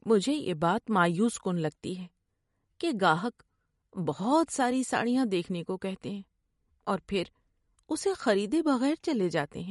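Throughout the speech, the treble stops dead at 11.2 kHz, a flat ceiling on a spectrogram, and sparse upper content flickers in and out between frames, sounding watery and swirly with smeared attacks. This plainly audible damage is likely MP3 compression, fitting roughly 48 kbps.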